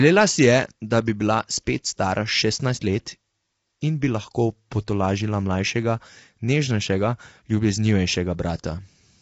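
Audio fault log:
throughout – low-delay AAC compression: rough, grainy speech with noise filling the gaps between harmonics and nothing above 7.8 kHz, likely from AAC-ELD at a low bitrate, around 24 kbps. Its short frames smear pitch harmonics, so the spectrogram shows blurred harmonic bands and a hard ceiling.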